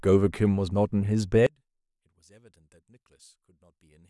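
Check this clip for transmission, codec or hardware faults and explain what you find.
One fault is present. From 1.47 s to the end, one channel inverted likely cancels the centred speech in mono, dropping it about 30 dB; the waveform collapses and the spectrogram goes nearly blank.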